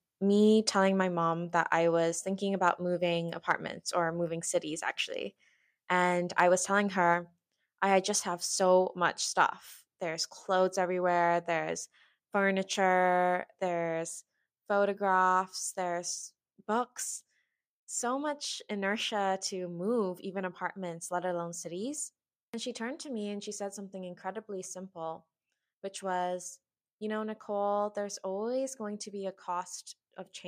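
Microphone volume stepped down at 1.02 s, between "me telling" and "mom that I was": the speech and the background drop together by about 3 dB in a single step, likely because call software judged the input too hot and lowered the device's input volume.

Microphone overload at 6.39 s: a brief peak runs about 4 dB past the converter's limit, so the waveform tops are flattened on roughly 2% of samples. That gives the loudest syllable a harsh, crackly edge, likely from the input volume being set too high.

Microphone volume stepped down again at 9.18 s (about 2 dB), at 13.68 s just after "clothes everywhere there's furniture" (about 2 dB), and at 15.72 s just before "there's books" (about 1 dB). Each is another sudden, whole-signal drop in level.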